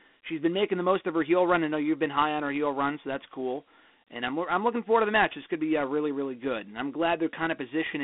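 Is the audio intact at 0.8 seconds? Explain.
No. At 0.8 s, as throughout, the speech sounds thin and phone-like, with gritty hiss trailing it and nothing above 3.8 kHz. This is Dialogic VOX ADPCM: 4-bit adaptive coding, which fits a 32 kbps stream.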